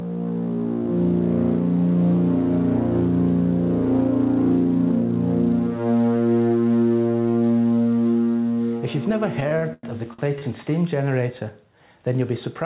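Gain pumping runs through the whole clip. The level ducks under each loud sound, with a swing of around 10 dB. Loud and soft parts sit too close together. The likely cause is excessive input gain feeding a fast limiter.

Repeated stalls (stutter) occur from 9.4 to 10.43 s. The jitter buffer ran dry six times, and the receiver stretched the last sound to cover the waits. About 233 ms was filled this way, with the longest wait near 100 ms. Nothing is lost, but the audio drags and stutters. The call path's G.711 coding keeps everything below 4 kHz.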